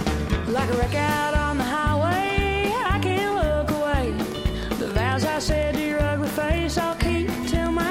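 The audio carries a train of clicks from 4.32 s to 7.67 s. About twenty similar pops arrive at an irregular pace, roughly 6.3 per second. They stand out at about 5 dB above the sound. Interference from nearby equipment or a faulty connection or power supply is the likely cause.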